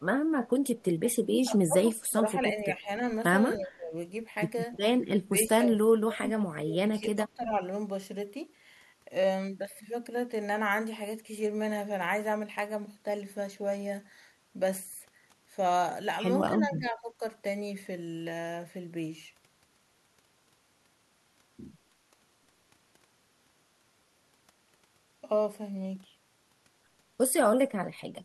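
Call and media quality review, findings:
Speech suppressed in double talk, four spots: 1.11–2.89 s, 3.57–3.95 s, 5.2–7.61 s, 16.58–17.21 s. The talker dips and chops out in pieces, worst in the first three stretches at about 20–25 dB down, gentler at 16.6 s (about 10 dB). This is likely the echo canceller's suppressor clamping down while both ends talk, unable to tell near talker from loudspeaker echo.

Echo leak at 4.72–4.78 s: a short, faint, delayed copy of the talker, about 25 dB below the speech and trailing by 304 ms. It's just a scrap, not a sustained tail. Likely the far end is on speakerphone and its canceller let some residual mic pickup slip through and get sent back.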